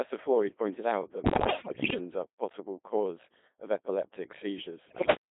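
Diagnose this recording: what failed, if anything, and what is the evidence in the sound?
Codec stage: the Codec 2 vocoder shapes the whole clip. The speech is buzzy and robotic and limited to 200 Hz to 3.5 kHz, with heavy damage that fits the 2.4 kbit/s mode. The decoder rebuilds sound from sine harmonics over a spectral envelope and does not keep the waveform. A spectrogram shows rigidly regular harmonic stacks, smeared consonants and no energy above 3.5 kHz.

Radio link: bit errors on digital voice radio occur from 1.24 to 1.98 s, between "pointed out that" and "are a possible cause", and again from 4.86 to 5.16 s, where the error rate is roughly twice as high. Flipped bits corrupt each frame's pitch, level and voicing, which produces warbles, bleeps and gibberish. The spectrogram shows harmonics jumping between frames, and the waveform shows abrupt envelope steps.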